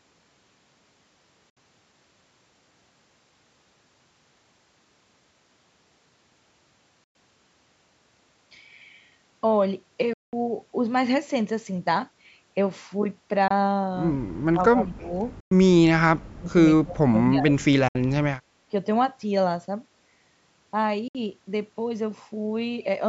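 A speech recording with two kinds of fault. Late packets on the headphone link were likely dropped, a Bluetooth dropout, leaving abrupt silent holes at 1.50, 7.04, 10.13, 13.48, 15.40, 17.88 and 21.08 s, lasting between about 21 and 192 ms before the speech resumes further along. An echo canceller, likely unable to separate the talker from the far end's loudspeaker echo, causes speech suppressed in double talk, pulling the voice down by about 20 to 35 dB in uneven stretches from 14.52 to 15.13 s, 16.19 to 16.47 s and 16.82 to 17.67 s.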